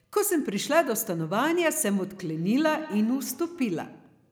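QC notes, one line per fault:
2.16–4.14 s, feedback echo between two devices: speech returns about every 150 ms at about -17 dB, a second device's playback re-captured; the spectrogram shows faint, time-shifted copies of each syllable.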